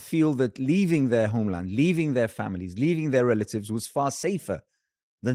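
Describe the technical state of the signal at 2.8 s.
At 2.8 s the speech is intact, with only the light coding of the Opus voice compression and no fault at that moment.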